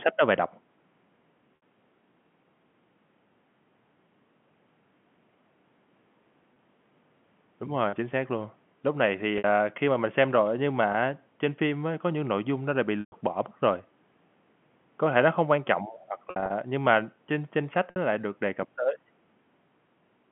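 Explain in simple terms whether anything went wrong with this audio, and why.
The speech breaks up briefly from packet loss with pitch repetition at 1.56, 6.54, 9.38, 10.92, 13.0, 16.3 to 16.5 and 17.9 seconds. Each gap lasts 20 to 120 milliseconds and is filled by repeating the last bit of voice, so the short ones sound held and buzzy, while the longer ones fade into silence before the speech returns.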